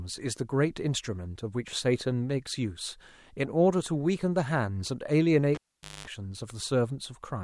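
At 5.55 s there's a pop as a live cable gets pulled and plugged in: about 0.48 s of near silence, then roughly 0.22 s of 50 Hz mains buzz while only the plug tip makes contact, and another pop at 6.07 s as the speech comes back.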